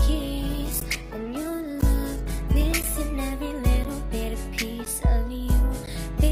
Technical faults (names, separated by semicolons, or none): call bitrate drop; gap between chunks